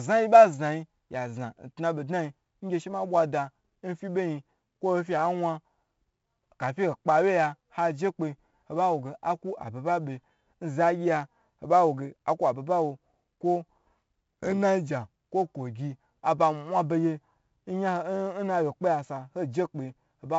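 Throughout, the speech has passed through 4-bit ADPCM compression, with each sample coded as a step from a prediction. The heavy error is a gritty hiss that swells on loud syllables and roughens sharp onsets. Nothing sounds above 7.7 kHz, which fits a 64 kbps stream.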